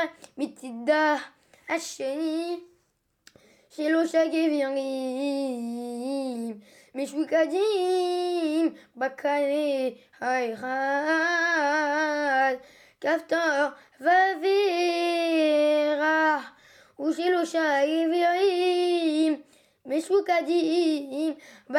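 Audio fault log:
No faults detected across the audio.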